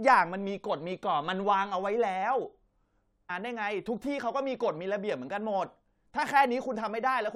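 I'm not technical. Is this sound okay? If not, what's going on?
No. At 3.29 s the speech suddenly jumps ahead with a tiny blip, as if part of it was cut out. This is likely a stream segment skipped: one chunk of the streamed audio failed to arrive, so the player moved straight on to the next chunk.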